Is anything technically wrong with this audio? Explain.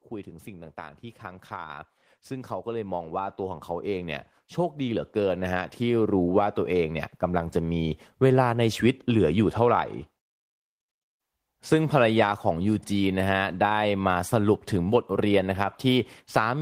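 Yes. From 0.24 s to 7.88 s there is automatic gain rising. The automatic gain control judged the incoming level too low and kept pushing its gain upward, by about 14 dB in all, over those 7.6 seconds. Because the gain acts on the whole signal, the speech and the background noise behind it grow louder together, so the room tone swells steadily along with the voice rather than staying at a fixed level.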